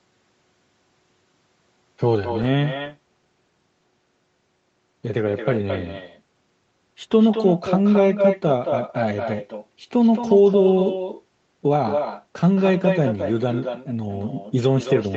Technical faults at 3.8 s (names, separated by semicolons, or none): echo with no canceller